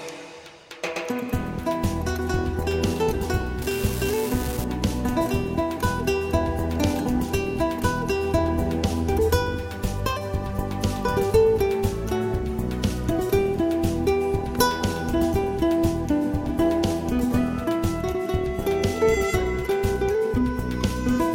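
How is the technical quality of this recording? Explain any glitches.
An unreliable data bit causes a short glitch from 3.62 to 4.64 s. For about a second, one bit comes through wrong in a random share of samples, as if a single data line were marginal. Each error is a spike of identical size, so the result is an even crackle or fizz that sits on top of the audio and doesn't follow its level. It stops abruptly at 4.64 s.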